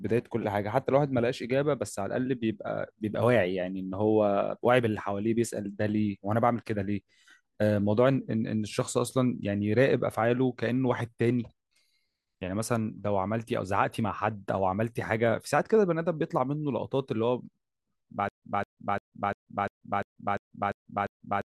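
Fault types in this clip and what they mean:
stutter with silent gaps: from 18.29 s to the end, one 0.21 s speech fragment repeats nine times, each followed by 137 ms of dead silence, every 348 ms. This is likely a stalled stream replaying its last buffer at each retry, so the intended audio is lost.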